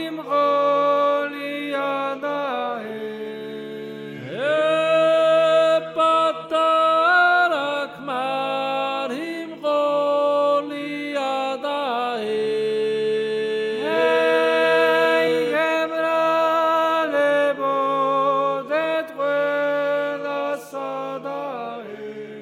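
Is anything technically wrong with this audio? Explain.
No, nothing is technically wrong with this audio.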